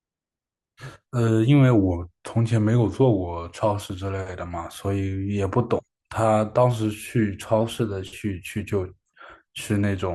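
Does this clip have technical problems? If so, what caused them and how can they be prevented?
Yes. From 1.77 to 3.58 s the speech slows by about 6% and drops roughly a semitone (about 107 cents), then snaps back. From 7.61 to 8.20 s it speeds up by the same amount and rises a semitone. This is likely a drift correction step, where clock-matching software abruptly changed the playback rate to rebalance its buffer. Using a shared clock or gradual, fine-grained resampling prevents it.

At 5.83 s the speech jumps forward by roughly 70 ms. The join fits about three skipped 20 ms frames, so compressed frames were skipped, either lost or rejected by the decoder as damaged. Reliable transport or storage with error checking prevents it.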